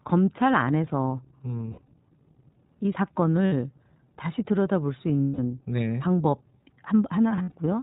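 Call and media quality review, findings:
iLBC codec on the speech path, whole clip. Narrowband coding cuts everything above 4 kHz; each 20 ms frame's excitation is coded on its own, leaving plainly audible roughness and a synthetic edge, consistent with the 15.2 kbps mode.

Lost iLBC frames at 1.72–1.89 s, 3.46–3.54 s, 5.22–5.39 s and 7.36–7.54 s. Packet loss; the decoder repeats the last pitch cycle with noise, heard as a held buzzy vowel. The 5.22 s gap is longest, at 160 ms. The first and last are broken up, each spread over 160 ms with runs up to around 70 ms. Speech recovers immediately afterwards.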